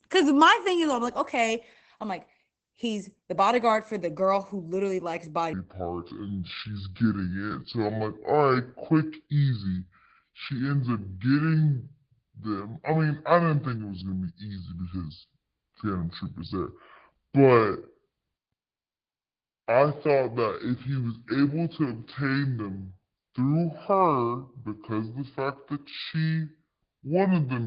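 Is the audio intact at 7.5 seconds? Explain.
No. At 7.5 s the speech falls inside a section at the wrong speed, running from 5.53 s to the end of the clip. It plays at 0.606 times the original rate, likely because it was fitted to the wrong clock, so speech is slow and drawn out and sits about ten semitones lower. On a spectrogram, harmonics and formants shift downward and syllables stretch along the time axis.

The moment also carries Opus voice compression, present throughout. The SILK linear-prediction coder keeps a wideband signal, and the coarse excitation coding, consistent with a rate around 12 kbps, is plainly audible as muffled, hoarse, slightly robotic speech. A spectrogram shows energy ending at a flat ceiling near 8 kHz, with smeared, blotchy detail below.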